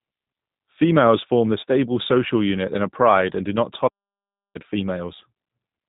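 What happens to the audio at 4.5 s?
At 4.5 s the sound is in a playback stall, running from 3.87 to 4.56 s, just after "pride and do not". For about 0.67 s the output goes fully silent, likely because the player ran short of data. A brief dropout would be far shorter, and packet-loss concealment would fill the gap with buzzy sound, but here the sound simply halts.

The surrounding sound also carries the G.729 codec, at 8 kbit/s, with nothing above 3.8 kHz. This gives a muffled, slightly rough and synthetic quality that continues on both sides of the stall, unlike the stall itself.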